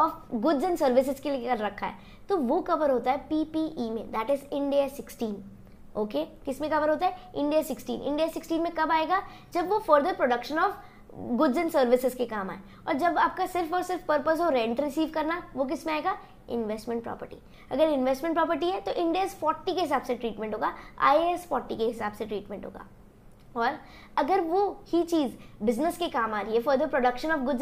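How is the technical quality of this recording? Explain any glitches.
No glitches or dropouts can be heard anywhere here.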